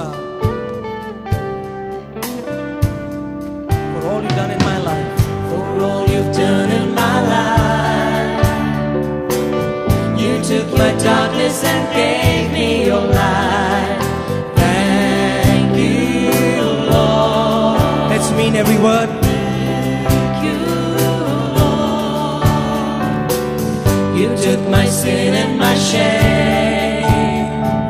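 Nothing here calls for comment, as there's no technical fault anywhere in the audio to point to.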